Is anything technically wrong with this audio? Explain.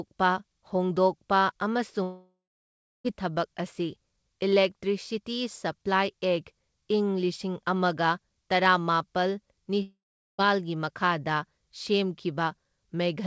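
Yes. At 2.03 to 3.07 s, and again at 9.82 to 10.41 s just after "ꯑꯃꯒ ꯇꯔꯥꯃꯥꯄꯜ", the speech gives way to a fading buzz or hiss, then silence of about 0.69 s and 0.43 s. This is likely a long network dropout: packets stopped arriving, the receiver stretched the last sound until it ran out, and the speech resumed with that stretch lost. The band stops at 8 kHz, consistent with the G.722 call codec.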